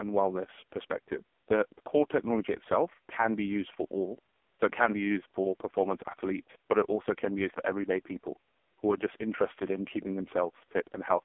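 A speech clip that sounds boxy, thin and heavily buzzy throughout, with a synthetic, rasping edge on every syllable and nothing audible above about 3.6 kHz. This is the AMR narrowband mobile codec: the voice is rebuilt from a vocal-tract model excited by sparse pulses, and the coarseness points to its lowest mode, around 4.75 kbps. Its phone-line band, roughly 250 Hz to 3.4 kHz, strips both the bass and the upper presence.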